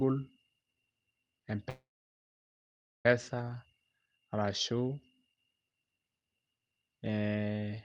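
At 1.69 s the speech stalls in a call audio freeze lasting until 3.06 s. The last sound carries on briefly as a fading buzz or hiss before about 1.2 s of silence. The likely cause is packets held up in transit, leaving the jitter buffer empty. Unlike a dropout, nothing is lost: speech resumes exactly where it stopped, everything after arrives about 1.36 s late, and the call codec's roughly 12 kHz upper limit holds throughout.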